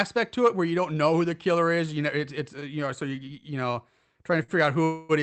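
Short stalls from late packets occur at 2.59 to 2.64 s, 3.15 to 3.20 s and 4.43 to 4.51 s. Each time, the jitter buffer empties, and a sound is held 15 to 52 ms with a slight buzz or dip. A call audio freeze follows from 4.84 to 5.12 s. The sound continues as a fading buzz or hiss for about 250 ms, likely because packets were delayed in transit, then resumes where it stopped.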